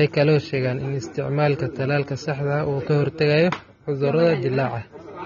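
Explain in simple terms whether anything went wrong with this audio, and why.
The speech was most likely squeezed hard by AAC compression, a codec that shrinks files by throwing away detail it judges you won't miss. Here it discarded too much. Nothing survives above about 6.9 kHz, so the voice sounds dull and muffled from start to finish, and the remaining detail is smeared, giving s-sounds and held sounds a fizzy, warbling texture that stays audible for the whole clip.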